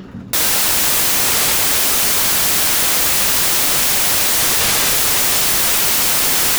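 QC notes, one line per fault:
0.33 to 6.58 s, samples built from the wrong bytes: from 0.33 s to the end the sound turns into loud, harsh broadband noise, close to white on loud sounds, because each sample's fast-changing low byte is read as its large part.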